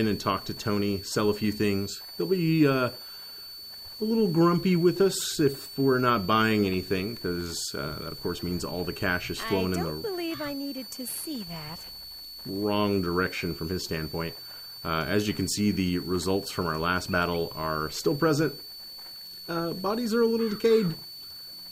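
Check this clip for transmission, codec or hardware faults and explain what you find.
There is one hardware fault, present for the whole clip.

Throughout, a thin, high whistle sits underneath the audio. Its pitch wanders slightly, between about 4.46 and 4.52 kHz, and it runs roughly 15 dB below the main signal. This is a switching supply whistle. A switch-mode power supply has dropped into an audible burst mode, or is beating against another supply, and its load-dependent switching rate leaks into the audio path.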